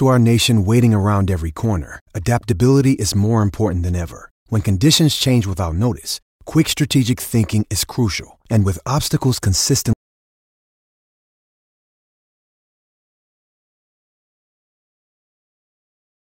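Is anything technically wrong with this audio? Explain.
Yes, there's an audio dropout to silence from about 9.93 s right through to the end, roughly 6.4 s of dead air. The speech just stops mid-flow and the gap is silent, no room tone at all, so the input was likely lost while recording carried on.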